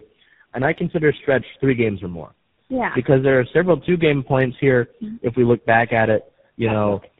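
Throughout, the speech shows tandem speech coding: it seems to have been decoded and re-encoded through three speech codecs in a row, with a final stage that fits GSM full rate. Each pass compounds the last, leaving rough, muffled, warbly speech with nothing above 3.8 kHz.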